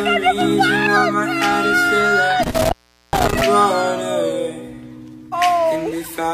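The sound has an intermittent contact fault between 2.43 and 3.42 s. A loose cable or plug opens briefly, here for about 0.41 s. The sound drops out with crackle at each edge. Faint hiss remains while the line is open.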